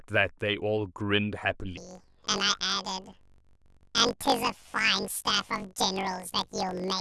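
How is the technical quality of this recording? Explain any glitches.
The recording is clean for its first 1.77 s and then degrades sharply until the end of the clip.

From 1.77 s onward the audio suffers from planar audio read as interleaved. Each block of about 21.3 ms, which fits a 512-sample block, stores one channel's samples followed by the other's, but playback treats them as alternating left-right pairs. Every block therefore plays twice at double speed, shifting the speech up 12 semitones with a robotic buzz at 46.9 Hz. A spectrogram shows harmonics doubled in frequency and vertical striping every 21.3 ms, and the waveform shows short repeating segments.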